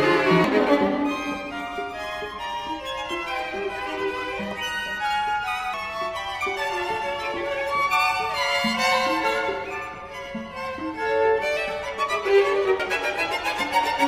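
At 0.44 s the audio jumps forward by about 0.4 s, and at 5.74 s and 12.80 s by about 0.2 s each: compressed frames skipped. Whole coded blocks of 92.9 ms never reach the output, roughly four and then two at a time. A spectrogram shows a sudden discontinuity in the spectral content with no gap, and the waveform shows an abrupt change in envelope.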